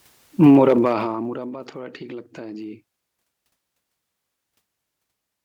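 From 0.48 to 1.56 s the speech level falls by about 25 dB in unsmoothed 1 dB jumps, some twenty a second. This is zipper noise. Each jump leaves a tiny click, so a fast ticking rides the fade, which a smooth fader move never produces.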